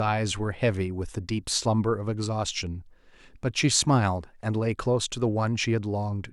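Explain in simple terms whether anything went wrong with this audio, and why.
Nothing went wrong here: the speech recording holds steady throughout, with no technical faults to be heard anywhere in the signal.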